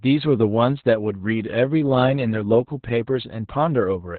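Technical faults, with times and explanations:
Throughout, Opus voice compression: narrowband SILK coding removes everything above 4.4 kHz and coarsens the excitation, leaving speech muffled, hoarse and robotic, consistent with about 8 kbps.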